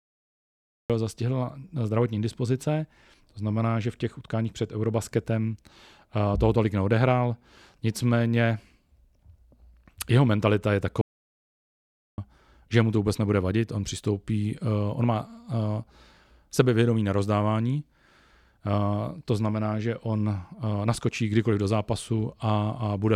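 The recording of this speech clip began late, so the first 0.90 s is digital silence and the audio starts abruptly at 0.90 s in the middle of a sound, with no natural attack, just before "zastihla zdravotní dispozice". This is a cut-off start: whatever preceded that moment was never captured, so the opening arrives already in progress rather than building up naturally. Later, the input signal was lost, most likely through a disconnected device, a failed link or an accidental mute, while the recorder kept writing silence. This produces an audio dropout to silence from 11.01 s to 12.18 s. The sound stops dead after "jeho mentalita je" and resumes mid-flow at "že mu to vůbec". The gap is complete silence with no room tone, and about 1.17 s of speech is simply missing.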